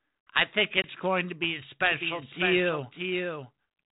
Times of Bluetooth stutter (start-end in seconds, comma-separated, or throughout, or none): none